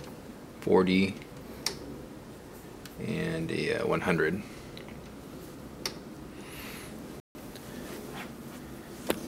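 At 7.2 s the sound cuts to silence for about 150 ms, ending at 7.35 s. This is a rebuffering stall: playback ran out of downloaded audio and waited for more before continuing. What separates it from a dropout or packet loss is the seam. The audio picks up exactly where it stopped, with nothing skipped, so the clip simply runs 150 ms longer instead of jumping ahead.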